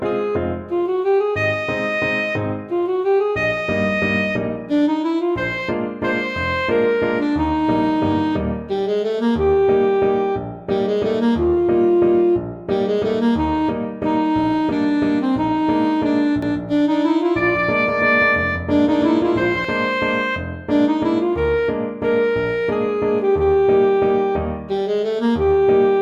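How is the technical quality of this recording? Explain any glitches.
A doubled audio track makes one stretch of the recording sound confused and smeared. From 16.43 to 19.65 s, a second full-band copy of the audio runs about 200 ms behind the original at roughly equal loudness, so every onset repeats as a dry, slap-like echo with no decay or room tone. The likely cause is the same signal arriving twice, once through a slower capture path. On a waveform, each transient appears as a twin peak about 200 ms later. On a spectrogram, every event shows a duplicate column shifted right, and the copy begins and ends abruptly at the segment edges.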